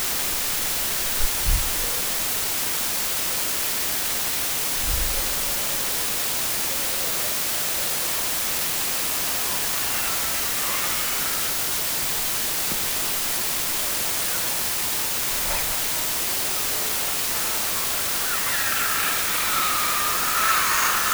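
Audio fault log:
throughout: low bit depth with dither. The sound is carried on only about 3 bits, and dither is added before each sample is rounded, so the rounding error becomes a steady white hiss that sits at roughly the same level as the sound itself. Without dither, the same coarse rounding would produce gritty distortion that follows the signal and drops out in quiet passages. Here the hiss is even and constant, with no added harshness on the sound.
7.34 to 21.13 s: block size mismatch (truncated). From 7.34 s to the end, one stage writes longer blocks than the next stage reads, and the tail of every block is discarded. The repeated cut produces a 50 Hz buzz, which fits 1024-sample blocks. Because material is dropped, the sound runs about 1.16 times faster while keeping roughly its normal pitch. The opposite mismatch would insert gaps and slow the audio down.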